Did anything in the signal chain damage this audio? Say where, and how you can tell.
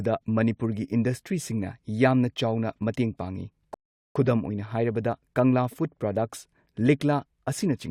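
Yes. A rebuffering stall at playback: from 3.74 to 4.16 s the speech drops to silence, then resumes where it stopped, adding about 0.41 s. The player drained its downloaded buffer and waited for data. Waveform shows a flat line; the spectrogram shows an empty column across all frequencies.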